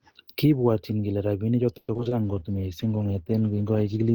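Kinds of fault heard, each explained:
repeated packet loss (robotic sound): Packets kept dropping from 1.77 to 2.13 s. Each gap was patched by extending the previous sound, leaving choppy, robotic speech.
jitter buffer slow-down: With its reserve running low, the receiver repeated small stretches of audio from 2.22 to 2.40 s, slowing the speech to 82% speed at unchanged pitch.
call bitrate drop: The bandwidth estimate fell, so the encoder coded more coarsely from 2.23 s to the end. This fits a halving to 16 kbps and leaves rougher speech.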